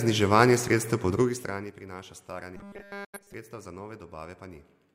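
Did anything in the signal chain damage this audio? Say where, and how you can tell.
Yes. Zipper noise from the gain stage, 1.12 to 1.77 s: the level drops about 20 dB in 2 dB steps, roughly fifteen per second, each step ticking audibly.

Robotic sound from repeated short buffers in the driver or buffer stage, 2.57 to 3.34 s: a rigid 200 Hz buzz replaces the natural sound, likely a 5 ms buffer replayed almost continuously.

Digital broadcast dropout at reception, 3.04 to 3.20 s: the audio fades out over 8 ms and about 85 ms goes missing, which fits two frames failing and being muted.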